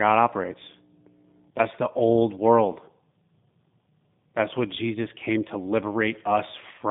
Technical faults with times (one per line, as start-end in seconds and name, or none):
0.00-6.90 G.729 codec